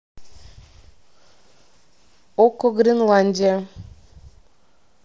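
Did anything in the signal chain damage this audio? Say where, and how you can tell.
Yes. At 3.41 s the Bluetooth link between headset and phone dropped audio, an instance of concealed Bluetooth headset packet loss. The receiver filled the 15 ms gap, which fits two lost packets, by repeating the best-matching stretch of the preceding waveform. That is why it is heard as a very brief buzzy, held tone with a slight warble as real sound resumes. The mSBC headset codec keeps the band near 8 kHz, with light graininess.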